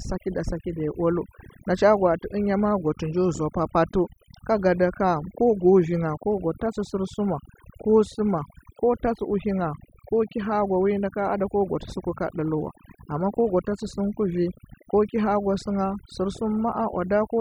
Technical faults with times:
0.00-17.41 overdone noise removal

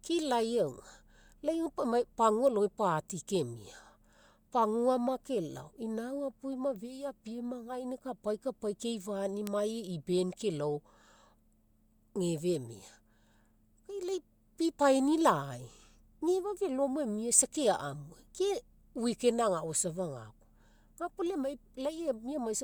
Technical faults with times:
2.47 bit error spike
9.47 bit error spike
14.82 bit error spike

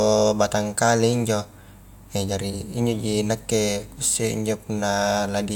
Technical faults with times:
none

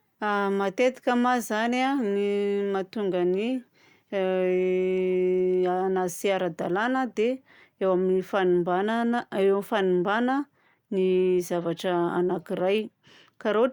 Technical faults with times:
none

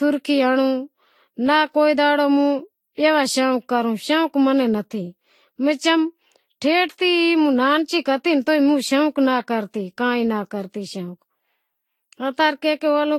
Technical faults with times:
0.00-13.19 generation loss

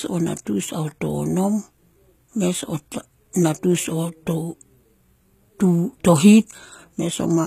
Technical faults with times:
0.00-7.47 HE-AAC compression

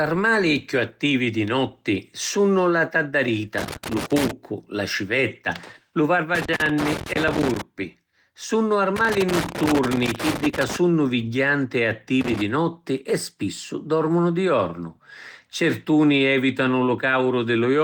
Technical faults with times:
3.58-4.31 loose connector crackle
6.35-7.61 loose connector crackle
8.96-10.76 loose connector crackle
12.21-12.42 loose connector crackle

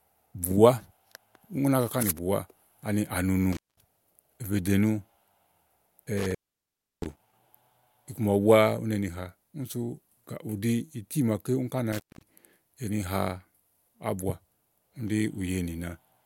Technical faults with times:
3.53-3.82 intermittent contact
6.03-7.34 intermittent contact
11.92-12.28 intermittent contact

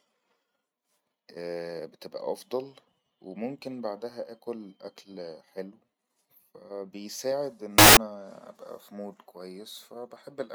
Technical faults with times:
7.78-7.97 samples built from the wrong bytes

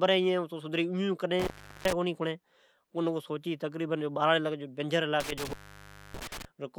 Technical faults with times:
1.40-1.93 intermittent contact
5.20-6.45 intermittent contact

